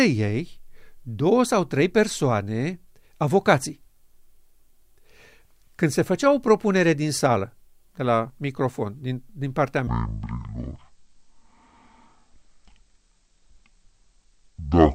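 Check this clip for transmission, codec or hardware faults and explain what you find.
One fault: a section at the wrong speed from 9.87 s to the end at 14.94 s, right after "microfon din din partea". The speech slows to 0.52 times normal and drops about ten semitones together, likely from playback against the wrong clock. Pitch and tempo falling in lockstep separates this from a pitch shift or time-stretch.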